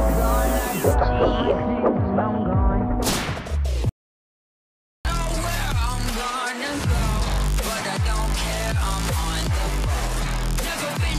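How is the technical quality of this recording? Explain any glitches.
The recording has one clear glitch. An audio dropout to silence runs from 3.89 to 5.05 s, about 1.16 s in all. The sound cuts off abruptly and returns just as abruptly. The gap between is completely dead, with no background or room tone at all. The likely cause is a brief loss of the input signal, such as a disconnected device, a failed link or an accidental mute, while recording carried on writing silence. Whatever sounded during that second is lost.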